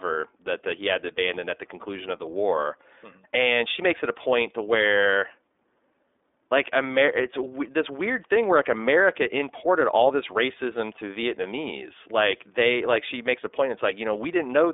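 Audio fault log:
Throughout, iLBC codec: the speech comes across clear but noticeably rough and a bit synthetic, and that damage is plainly audible. The codec squeezes each 30 ms frame's excitation on its own, without borrowing from the frame before. It's narrowband too, so the line band sits around 300 Hz to 3.6 kHz and nothing above 3.7 kHz gets through, giving that thin telephone sound. The rate fits roughly 13 kbps.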